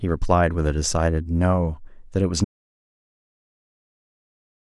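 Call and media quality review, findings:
Audio dropout to silence at 2.45 s, lasting to end. Input likely lost (device disconnect, link failure or mute) while recorder kept writing silence; speech cuts off mid-flow into total silence, no room tone.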